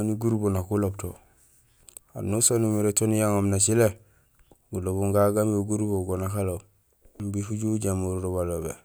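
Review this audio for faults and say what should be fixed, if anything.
Nothing to fix; no faults were found anywhere in the speech recording.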